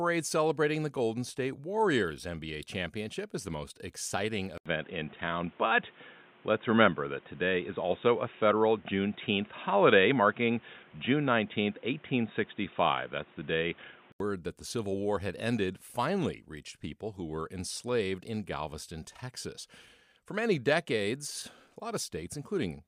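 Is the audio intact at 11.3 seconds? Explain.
No. From 4.58 s, just after "is the most exciting", to 14.20 s, before "that the", the speech goes dull and boxy. The input likely switched to a poorer device, whose narrower band cuts everything above 3.8 kHz. An 80 ms gap opens at the switch, the level shifts by roughly 5 dB, and new background noise sits roughly 30 dB below the signal. A spectrogram shows an empty band above 3.8 kHz across this span, and the waveform shows the brief silence and the level step.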